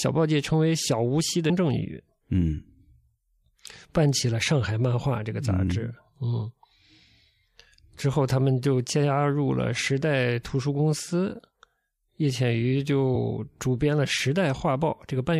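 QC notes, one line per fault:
1.49 s: damaged data in a compressed stream. A brief glitch, about 16 ms long, cuts into the speech. Damaged compressed data makes the decoder misread the frame and lose sync, then resume at the next valid frame header.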